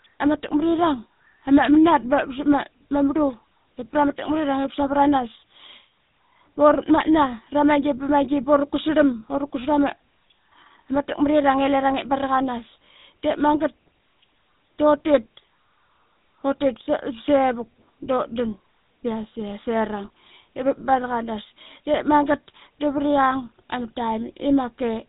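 GSM full-rate codec damage runs through the whole clip, from the first second to the last. The speech has passed through the original GSM coder, which fits a 13 kbps stream. That coder models the vocal tract as a filter and excites it with a sparse train of regularly spaced pulses, discarding two of every three excitation samples. Everything above 4 kHz is gone, so the speech sounds muffled, and the roughness is plainly audible as a buzzy, gravelly grain throughout.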